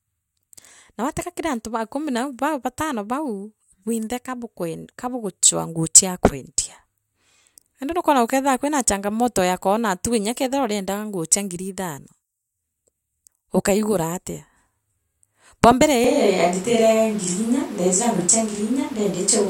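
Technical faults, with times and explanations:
16.04 s to end, switch to a distant microphone: voice abruptly turns hollow, roomy and bass-light at roughly unchanged level, noise about 25 dB down; close mic likely lost.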